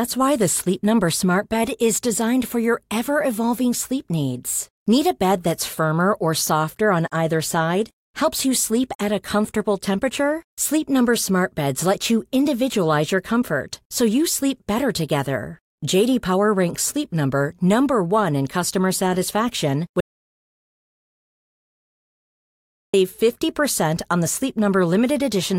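At 20.00 s, just after "in customer satisfaction", the speech cuts off abruptly and the audio drops to silence. This is an audio dropout to silence. No room tone or hiss remains in the gap. It lasts about 2.93 s, until 22.94 s, when the sound returns mid-flow. The likely cause is a lost input, such as a disconnected device or a brief mute, while recording carried on writing silence. Whatever was said in that stretch is gone.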